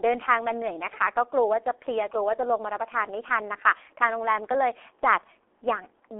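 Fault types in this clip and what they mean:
G.723.1 codec: Throughout the speech, nothing is heard above about 3.8 kHz, and the sound sits in a telephone band of roughly 300 Hz to 3.6 kHz. The heavy coding damage leaves it muffled and hoarse, with smeared consonants, which fits a rate near 6 kbit/s and 30 ms frames. A plain band-limited telephone line keeps its consonants crisp, so the rough, blurred texture points to the codec rather than to filtering alone.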